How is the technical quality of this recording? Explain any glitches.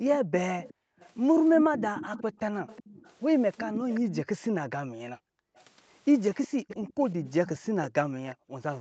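The recording has two related call faults: a faint delayed double of the speech, and a room background that keeps ducking away. The audio tops out at about 8 kHz, consistent with the Opus call path in use.

Echo leak, from 0.12 to 4.16 s and from 6.43 to 8.35 s: a copy of the speech trails the original by 364 ms, roughly 15 dB quieter. The likely cause is a far-end loudspeaker whose echo canceller let part of the microphone pickup return down the line.

Background gated by the echo canceller, at 0.2 to 0.99 s, 2.23 to 2.38 s, 4.21 to 5.55 s, 6.52 to 6.96 s, and from 7.71 s to the end: the room tone drops by about 40 dB (about 32 dB at 6.52 s). While the loudspeaker played, the canceller clamped the microphone down hard, then released it.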